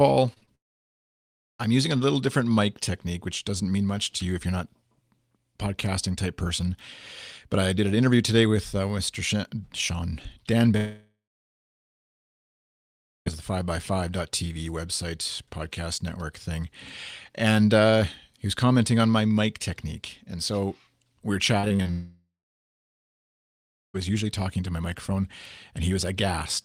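At 0.33, 0.38 and 0.45 s, short concealed packet loss leaves brief smears, each 20 to 40 ms of audio replaced by extrapolated sound, showing as blurred vertical slivers on a spectrogram.

From 0.55 to 1.61 s, just before "I'm using a little", the sound collapses into about one second of near-silence, likely a long network dropout. It reads as a flat, empty band on the waveform, and the same happens from 10.77 to 13.28 s, with about 2.1 s silent.

Right after "so we were", between 21.60 and 21.87 s, repeated packet loss gives robotic, choppy sound: five gaps of up to 30 ms, about 37% of that stretch patched, appearing as striated, repetitive spectral texture.

From 21.91 to 23.96 s, ending before "usually talking to my", another likely long network dropout fades into roughly 1.7 s of flat silence.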